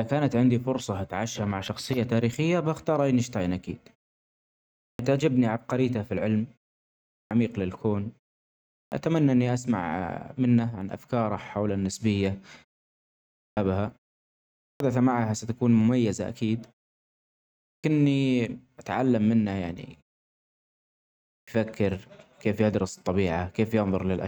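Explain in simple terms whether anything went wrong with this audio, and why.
Clipped start after a pause: at 4.58, 6.9, 8.46, 13.1, 14.41, 17.38 and 21.05 s, speech bursts out of silence missing its first 0.4 to 0.47 s. The playback device dozed off during the pause and woke too late. Muted pauses only quiet the gaps, but this fault eats real speech.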